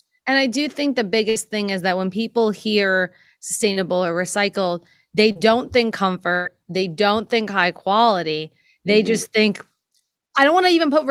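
At 1.29 to 1.37 s, right after "I do think the", a burst of packet loss left about 60 ms of audio undelivered. The receiver bridged the hole by extending the last sound and letting it fade, then picked up again at "thing is that when" with those 60 ms gone, so the speech jumps forward past a held, dying tail.

Two shorter drops follow, each handled as short concealed packet loss. At 3.73 to 3.77 s, just before "or recycled they", about 20 ms failed to arrive in time. At 5.31 to 5.37 s, about 40 ms were lost. Each time the decoder patched the gap by continuing the preceding sound and blending back into real audio, which leaves a brief smear or wobble at each spot.

The longest is a second burst of packet loss at 6.33 to 6.47 s, leading into "they don't think high". About 120 ms went missing, and nearly all of it was filled with the extended, fading sound rather than silence. The result is a stretched patch before the speech resumes further on.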